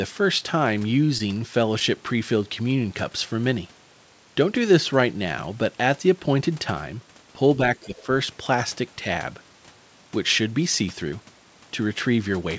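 Right at the start there are two short stalls from late packets, at 0.38 to 0.42 s and again at 1.18 to 1.22 s. The jitter buffer ran dry, so roughly 20 ms of sound gets held over with a slight buzz or dip, then carries on without losing anything. From 7.8 to 8.08 s the speech dips by about 10 dB, which is likely speech suppressed in double talk as the echo canceller ducked everything. Inside that dip, around 7.98 to 8.04 s, a quiet scrap of the other side's voice leaks through, about 25 dB under the talker, likely loudspeaker echo the canceller didn't fully remove.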